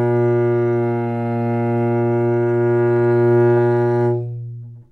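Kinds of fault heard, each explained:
No kinds of fault are heard in this clip.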